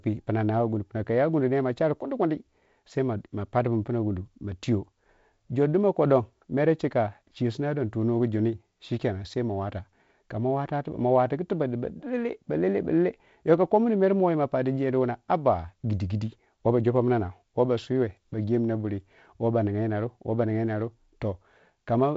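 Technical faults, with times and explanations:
Nothing stood out on listening to this speech, which comes through a wideband telephone path with a light upper-band hiss typical of G.722 coding at this rate.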